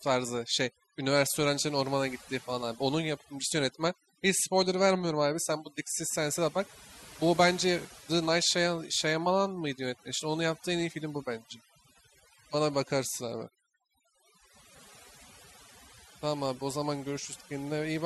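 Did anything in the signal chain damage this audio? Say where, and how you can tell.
Yes. Overdone noise removal runs throughout the speech, at the processing stage. The background collapses to near silence flecked with twinkling specks, and quiet speech detail is lost because bands near the noise estimate are pushed far down, taking it with them.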